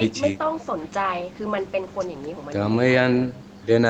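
Nothing goes wrong anywhere in this speech; what you hear is just an ordinary call path doing its job, with the top end stopping at around 8 kHz, as you'd expect once the microphone processing and the call codec have had their turn.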